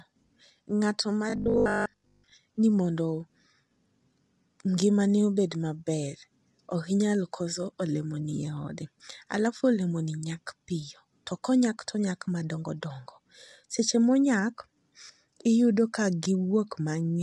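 Throughout the speech, the likely cause of the damage is low-delay AAC compression of the AAC-ELD kind used for video calls. Its short frames cannot separate the voice's harmonics cleanly, and at the rate this sound points to, around 32 kbps, there are too few bits to go round. The voice comes out plainly rough and grainy, with noise filling the gaps between harmonics, and nothing at all above about 11.6 kHz.

From 1.30 to 2.34 s, just before "ni mondo", fresh audio stopped arriving often enough, and the playback side likely covered the gap by replaying its last short buffer again and again while the real audio was skipped, for most of that stretch. The repeats impose a fixed 50 Hz pitch, which fits a 20 ms buffer. The result is robotic sound from repeated short buffers: a stiff, metallic buzz that only loosely tracks the speech.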